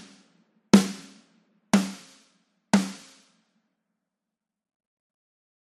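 Throughout the clip, the encoder appears to have had too few bits to cover all 32 sub-bands, so it dropped the upper bands and coarsely quantised the rest, which is consistent with MP2 compression at a low rate, likely around 80 kbps. The damage is plainly audible: the sound is dull and lacks top end, high-frequency content flickers in and out as bands switch on and off, and a gurgling, granular grit runs through everything that remains.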